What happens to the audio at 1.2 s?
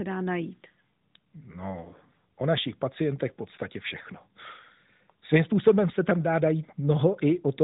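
Nothing goes wrong at 1.2 s: the speech carries on intact through the AMR narrowband mobile codec, which at 12.2 kbps leaves only light, band-limited coding colour at that moment.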